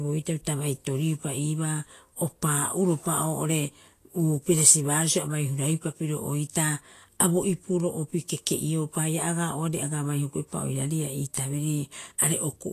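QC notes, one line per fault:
Throughout, Vorbis compression: the speech has a grainy, hissy upper register, with sibilants turned to rough noise and consonant onsets softened, and nothing is present above 14.2 kHz. This is likely a low-quality Vorbis encode, and the damage is plainly audible, which fits a bitrate of roughly 34 kbps. The encoder has dropped the top band entirely and quantised the remaining treble so coarsely that fine detail is replaced by noise of similar energy.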